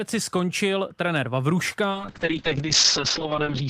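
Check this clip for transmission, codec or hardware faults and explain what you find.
One transmission fault is present. A call bitrate drop begins at 1.91 s and runs to the end of the clip. After the bandwidth estimate fell, the encoder coded more coarsely and cut the audio band from 20 kHz to 8 kHz. The speech turns muffled and rough, fitting a fall from 64 kbps to 8 kbps, with the worst stretch lasting 1.19 s.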